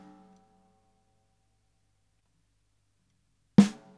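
Nothing is technically wrong with this audio.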